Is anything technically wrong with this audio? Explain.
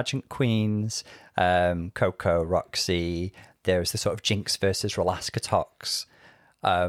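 No, nothing is technically wrong with this audio.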